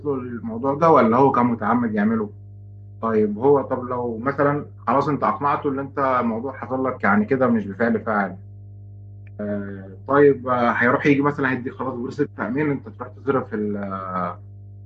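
From start to finish, a mains hum sits under the speech: a steady low tone at 50 Hz with some low harmonics above it, roughly 20 dB below the speech level. Power-line current has leaked into the signal path, as happens with a ground loop or a nearby transformer. On a spectrogram it shows as a bright unbroken line at 50 Hz with weaker parallel lines above. In pauses, the waveform never settles to silence but keeps a regular low ripple.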